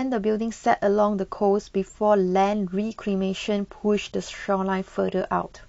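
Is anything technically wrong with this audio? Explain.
Yes. At 2.92 s the stream falls back to a lower bitrate and stays there to the end: the adaptive player, reacting to a slowed connection, switches to a cheaper encoding without a pause. The speech changes abruptly, with compression artefacts coming up. That degradation fits a move from roughly 96 kbit/s to 32 kbit/s AAC.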